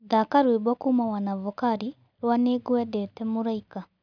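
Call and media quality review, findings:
No faults found in review.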